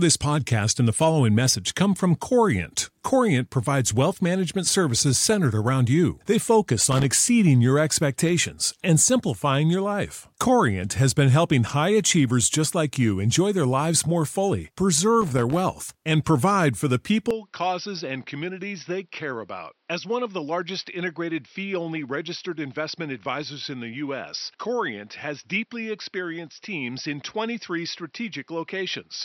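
From 6.91 to 7.05 s, just before "exceeding your expectations and", and again from 15.21 to 15.59 s, between "their lives more fully" and "and provide for the", loose connector crackle chops the signal into irregular scratchy bursts, visible as ragged spikes on the waveform and vertical streaks on the spectrogram.

At 17.31 s, right after "and provide for the", the sound abruptly turns duller and about 10 dB quieter with no gap. This is likely the input switched to a poorer device. On the spectrogram, everything above 5.8 kHz vanishes, and a new noise floor appears roughly 45 dB down.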